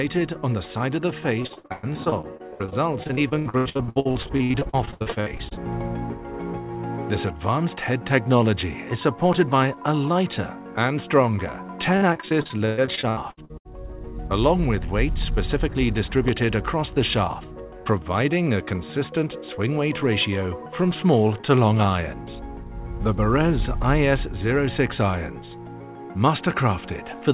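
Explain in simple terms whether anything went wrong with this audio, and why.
From 1.42 to 5.59 seconds, and again from 11.97 to 13.67 seconds, the sound turns choppy and robotic, with bits missing. This is repeated packet loss: chunks of audio kept getting lost in transit, and each hole, some over a tenth of a second, was patched by stretching the previous sound.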